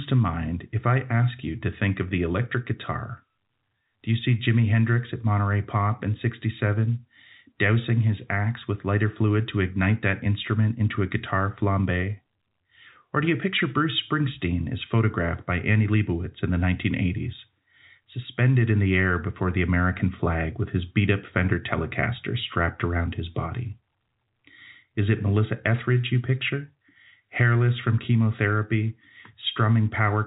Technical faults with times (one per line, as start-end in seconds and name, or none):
none